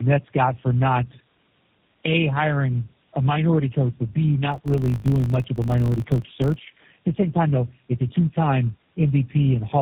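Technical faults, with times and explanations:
Throughout: tandem speech coding. The speech is rough, muffled and warbly. The damage sounds compounded, which points to about three low-rate speech coders in a row, likely AMR-NB, G.729A and GSM full rate joined by G.711 links. Each coder re-encodes the previous one's artefacts, so the smearing stacks up. That compounding is what separates it from a single narrowband codec, which would sound band-limited but much cleaner.
4.52 to 6.82 s: filter restarted on every block. A 50 Hz buzz rides on the sound. Each processing block starts from a zeroed filter state and leaves a small transient, and 50 ticks a second fits 20 ms blocks. Unlike mains hum, the buzz rises and falls with the signal's level and disappears in quiet stretches. It also has a clicky texture rather than a smooth tone, and it is confined to this span.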